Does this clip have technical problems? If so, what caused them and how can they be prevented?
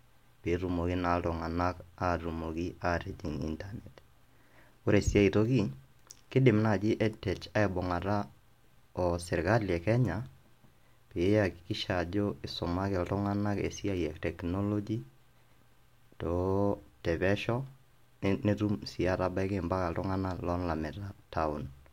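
No, there are no technical problems to fix here.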